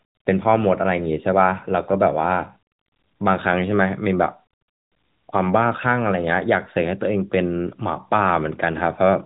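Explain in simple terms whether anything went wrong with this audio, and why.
Nothing went wrong with this speech recording. It has passed through the AMR narrowband mobile codec, the standard phone-call format, which keeps only sound below about 3.8 kHz and so gives it the familiar narrow tone of a mobile call.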